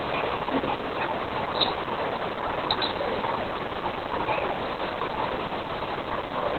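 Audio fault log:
throughout, Opus voice compression: the speech sounds muffled, hoarse and faintly robotic, with nothing audible above about 4 kHz, so consonants lose their edge and the voice takes on a buzzy, grainy quality. This is the SILK linear-prediction coder working in narrowband mode, cutting the band to 4 kHz and coding the excitation very coarsely. The degree of damage points to a bitrate around 8 kbps.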